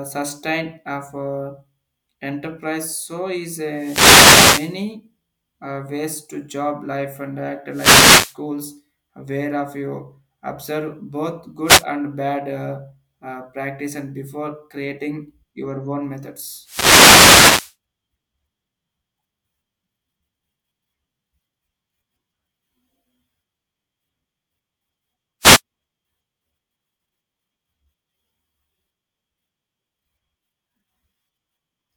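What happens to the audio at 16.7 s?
The wireless microphone's FM radio link fades as reflected signals cancel, so receiver noise surges from 16.62 to 17.75 s. This wireless microphone noise hit sounds like a burst of static and swish lasting just over a second.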